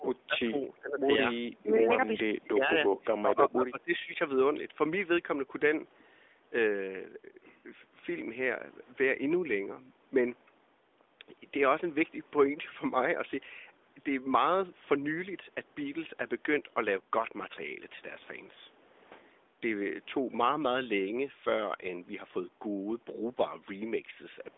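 The speech dips and breaks up at 0–0.08, 0.27–0.57, 0.8–1.07, 1.51–1.73, 2.24–2.75 and 2.97–4.19 s, by about 15 dB, and about 25 dB in the fourth and fifth. This is likely speech suppressed in double talk: the echo canceller turned the talker down along with the far side's echo.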